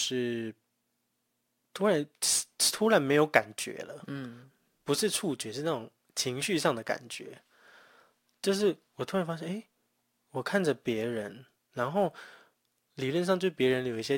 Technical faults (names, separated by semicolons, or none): sample clock jitter